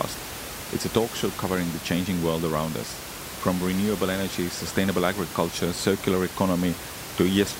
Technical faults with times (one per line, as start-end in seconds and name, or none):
none